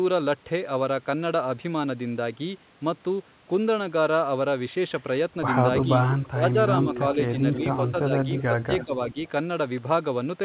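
From 5.81 to 6.28 s, 6.94 to 7.0 s, 7.35 to 7.77 s, 8.3 to 8.43 s and 8.8 to 8.86 s there is echo leak. A quieter copy of the speech returns 333 ms late, about 10 to 15 dB down. It is likely loudspeaker pickup that the echo canceller left behind.

Speech suppressed in double talk starts at 6.28 to 6.56 s, then 7.14 to 7.43 s and 7.84 to 9.17 s. The level dips by roughly 5 to 20 dB, likely because the canceller turned both talkers down.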